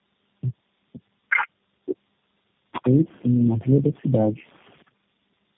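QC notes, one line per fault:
Throughout: tandem speech coding. The speech is rough, muffled and warbly, with nothing above 3.8 kHz. It sounds like repeated decode-and-recode passes through low-rate narrowband coders, which fits around four speech codecs in a row, such as G.729A and AMR-NB. Each pass compounds the previous one's damage.
1.29–1.47 s: other side's voice leaking through. A brief second voice, roughly as loud as the main talker, cuts in for under 0.2 s. This is likely far-end audio from the loudspeaker reaching the microphone because the echo canceller did not fully remove it.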